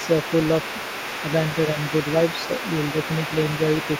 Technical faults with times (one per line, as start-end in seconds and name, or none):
0.00-3.99 other side's voice leaking through